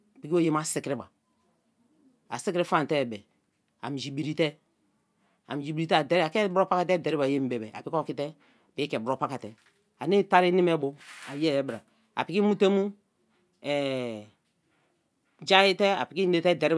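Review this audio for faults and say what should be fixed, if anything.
Nothing stood out on listening to this speech recording, so there is nothing here that needs fixing.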